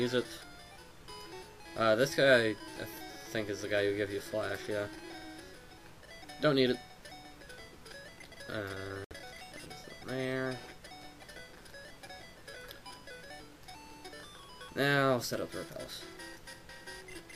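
At 9.04 s the sound cuts out and stays silent until about 9.13 s, a gap of roughly 80 ms. When it returns, it picks up further along than where it stopped, as though it had kept playing through the hole, and about 64 ms of material is missing. This is likely a Bluetooth dropout, where packets failed to arrive at the headphones in time and were discarded.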